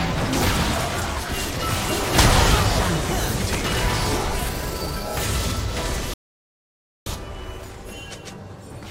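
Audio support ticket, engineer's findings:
Playback stall, 6.14 s to 7.06 s. Output drops to silence mid-flow for about 0.92 s, then resumes. Probable component: player buffer or audio thread. Likely cause: input ran dry or thread blocked, so no samples reached the device until recovery.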